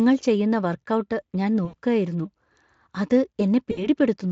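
VoIP packet loss concealed by the speech codec: packets dropped at 1.65 to 1.75 s and 3.71 to 3.87 s, so the decoder extrapolated its last pitch and filter, stretching each gap into a fading buzzy tone or coloured noise.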